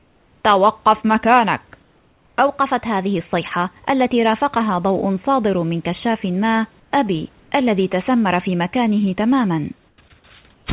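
Comfort noise in place of the background at 0.00–0.44, 1.82–2.38, 6.80–6.92, 7.40–7.52, 9.88–9.98 and 10.54–10.66 s. In these speech pauses the room's background becomes a flat, featureless hiss, usually about 3 to 5 dB quieter. This is likely because the sender paused transmission and the receiver synthesised filler noise.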